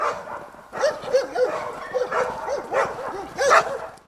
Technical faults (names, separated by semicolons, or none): none